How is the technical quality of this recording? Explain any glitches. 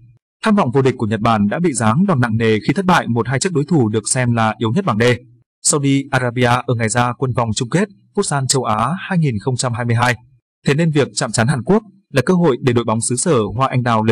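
No audible glitches or dropouts.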